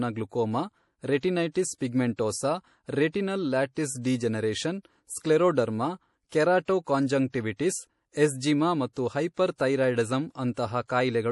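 MP3 compression damage runs throughout this speech clip: nothing survives above 11.5 kHz, and weak detail swirls in and out, likely from a starved encoder, fitting about 48 kbps.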